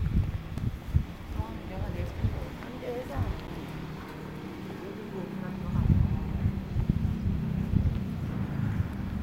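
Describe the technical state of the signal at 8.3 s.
At 8.3 s the audio is intact, with no dropout, distortion or other technical fault in the signal at that moment.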